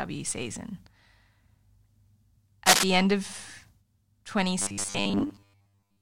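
From 2.66 to 2.84 s, cable scratch noise rasps over the speech at about 5 dB above it, likely from a worn connector or cable shifting contact resistance. From 4.62 s to the end, the speech turns into robotic sound from repeated short buffers: a rigid, metallic 100 Hz buzz, likely from 10 ms buffers looping while most of the real audio is skipped.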